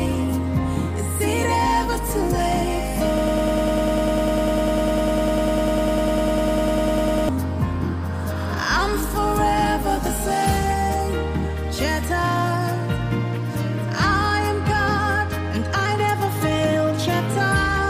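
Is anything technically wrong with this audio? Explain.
Yes. From 3.18 s to 7.29 s there is a broken-record loop. The likely cause is a player, encoder or stream that stalled and kept resending the last fragment it held instead of fresh audio. You hear a 100 ms slice repeating exactly, back to back, 41 times. That produces a rapid, mechanical stutter lasting about four seconds, and whatever should have played during that stretch is lost.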